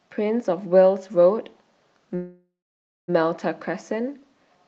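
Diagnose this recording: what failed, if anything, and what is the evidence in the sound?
A call audio freeze at the network and jitter-buffer stage runs from 2.15 to 3.1 s: a fading buzz or hiss fills about 0.93 s, the last 0.57 s silent. Speech then resumes intact and about 0.93 s late, likely because packets stalled and the buffer emptied.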